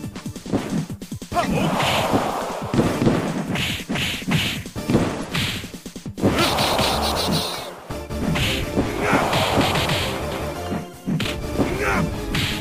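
A short chirp or burst of noise interrupts the audio from 5.19 to 5.24 s, a corrupt frame decoded. Damaged bits in around two compressed frames were played anyway, so misread gains or codes put energy at the wrong frequencies for that instant.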